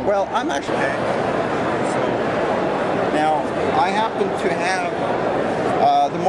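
No technical faults are audible.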